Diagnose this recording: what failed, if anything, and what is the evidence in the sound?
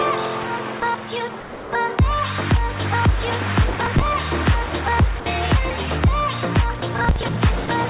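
Call processing: at 0.8, 1.4–1.72, 5.2–5.26, 6.8 and 7.66 s the sound gives way to steady comfort noise, likely sound dropped by the voice detector.

Driver or buffer stage: processor overload crackle, gritty tearing at 3.7–4.09 s and 7.04–7.36 s, where runs of deadlines, fitting roughly 10 ms buffers, were missed and skipped.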